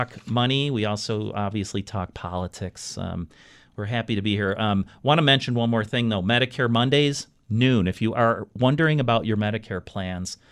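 No technical fault can be heard anywhere in this speech recording, and the signal holds steady throughout.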